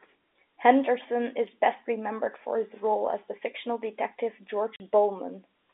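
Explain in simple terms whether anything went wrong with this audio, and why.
A short stretch of the speech was lost on its way across the network, a fault called packet loss filled with silence. From 4.76 to 4.80 s the receiver played nothing in its place, leaving a sudden 40 ms hole, about two 20 ms packets' worth, with hard edges, in the narrow sound of a G.711 telephone line.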